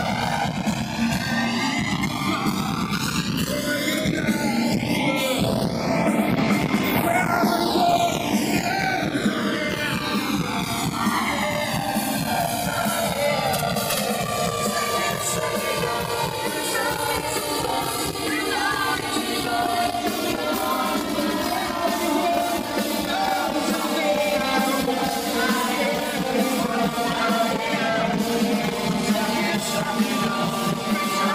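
From the start to the end, the channels are drifting apart. Left and right come from devices running on separate clocks. One runs fast by roughly 200 parts per million. The delay between the channels creeps upward and reaches around 5 ms by the close. Summed to mono, the two copies interfere. Comb-filter notches sweep slowly down through the spectrum. The result is a slow, steady flanging that colours the whole clip.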